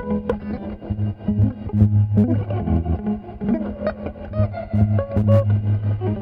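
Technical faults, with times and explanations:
No technical faults are present in this music clip.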